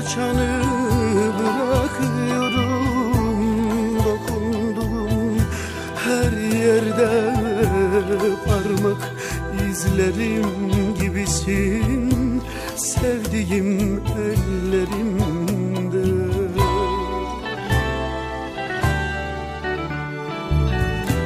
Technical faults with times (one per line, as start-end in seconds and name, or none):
none